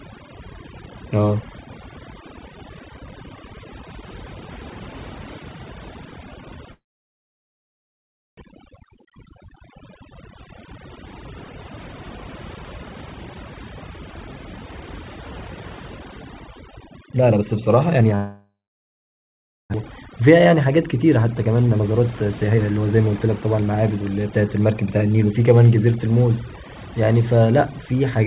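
Right from the start there's overdone noise removal at work. The noise reducer was pushed too hard, so it's knocking out individual frequency bands whenever they sit near its noise estimate, and the quieter parts of the speech get clipped along with them. You hear a background that's almost dead silent apart from little twinkly specks. All of this sits inside a band that stops at 4 kHz, which fits a telephone codec like G.711.

At 6.72 s the sound briefly smears out as a fading buzz and then goes silent for about 1.6 s before picking up again at 8.43 s, with roughly a second of material simply gone. That's most likely a long network dropout, with the receiver stretching the last bit of audio and then giving up.

Right after, from 8.52 to 9.64 s, there's a jitter buffer speed-up. The buffer ended up holding more than it wanted, so it trims out tiny pitch-period slices to catch up. Here it's gentle, about 105% speed with only around 50 ms cut, so the pitch stays put and it's barely hurried.

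A much harder speed-up hits from 17.06 to 18.13 s, running at about 134% with roughly 0.4 s shaved off, and it sounds noticeably rushed.

Straight after, at 18.15 s, comes another fade into silence, about 1.2 s of it, until 19.76 s, again with around a second lost.

Then from 19.90 to 23.97 s the buffer drains that backlog, running at about 119% and cutting around 0.7 s in total. The pitch holds, but the pace is clearly quickened for those four seconds.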